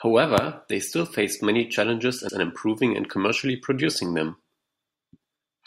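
Repeated frames at 2.29 to 2.38 s: a 96 ms stretch of the compressed speech was stored twice, consistent with a run of three frames, so the decoder plays it again. The speech stutters, and the clip runs 96 ms longer.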